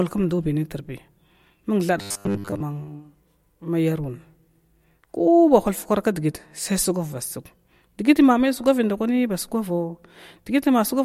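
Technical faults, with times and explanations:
1.98 to 2.62 s, robotic sound from repeated short buffers: the speech turns into a rigid, metallic buzz at 100 Hz that still loosely tracks the syllables. This is likely starved playback looping the last 10 ms of audio, replacing most of the real signal across that stretch.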